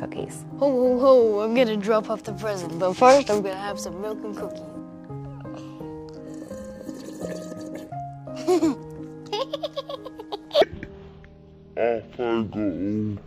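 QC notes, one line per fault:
10.62–13.26 s, stereo read as mono: the left and right samples get played back to back as one channel, so the sound drops to half speed and a full octave low.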